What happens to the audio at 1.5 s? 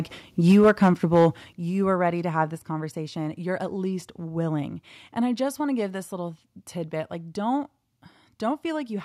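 At 1.53 s the level drops abruptly by about 8 dB, just before "you are ready to", likely because the microphone volume stepped down. Speech and background fall together in one step and stay lower, unlike ducking, which pumps back up.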